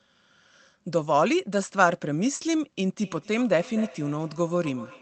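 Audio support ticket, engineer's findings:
Feedback echo between two devices, 3.04 s to end of clip. Speech returns at a fixed interval of roughly 0.3 s, peaking about 18 dB below the direct speech. Probable cause: second device in the same room replaying the call into an open mic. Its echo canceller only removes its own playback.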